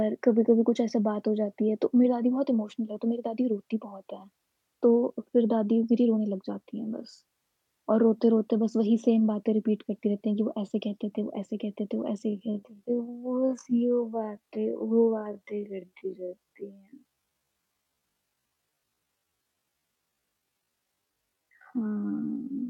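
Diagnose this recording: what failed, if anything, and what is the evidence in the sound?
From 12.21 s to the end, the speech abruptly slows to 0.51x, dragging at unchanged pitch: likely a time-stretched section, padded by repeated short pieces.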